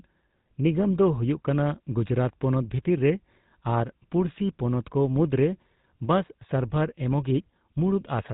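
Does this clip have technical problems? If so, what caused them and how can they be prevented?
Yes. Throughout, the speech carries GSM full-rate codec damage: buzzy, gravelly roughness and nothing above 4 kHz, consistent with 13 kbps pulse-excited coding. Prevent it with a wideband codec.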